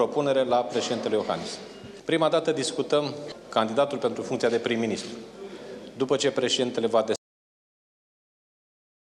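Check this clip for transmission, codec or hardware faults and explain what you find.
One fault is present: a cut-off end. At 7.16 s the sound stops mid-event, because the final buffers were never written or played out. It falls straight to digital silence with no natural decay. A waveform shows an abrupt vertical edge to a flat line, and a spectrogram goes blank from 7.16 s to the end.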